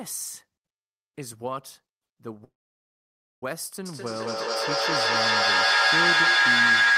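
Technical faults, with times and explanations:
2.44 to 3.43 s, call audio freeze: the speech stops and about a second of filler takes its place, a brief tail of the last sound and then close to 0.92 s of silence, before carrying on exactly where it left off. Nothing is lost, it just starts later, pushed back by about 0.98 s. That pattern likely comes from packets held up in transit, so the jitter buffer ran dry and the receiver had nothing to play until they turned up.
3.86 to 6.97 s, feedback howl: a tone near 1.5 kHz rises and keeps growing to the end of the clip, peaking at about 14 dB above the speech level and pulsing roughly every 200 ms. What you're hearing is a loop between a microphone and a loudspeaker in the same room, where every pass round adds level and narrows the sound toward the frequency the loop favours. The pulse spacing tracks the loop's delay, and it never stops because nobody broke the loop.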